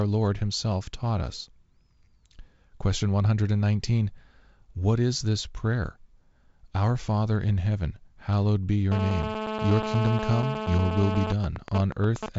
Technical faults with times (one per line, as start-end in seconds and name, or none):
8.92-11.32 GSM phone buzz
11.32-12.29 GSM signalling bursts